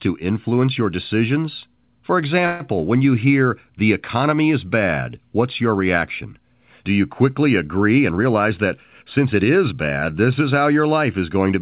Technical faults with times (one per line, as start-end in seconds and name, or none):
2.46-2.62 call audio freeze
7.96-9.73 jitter buffer speed-up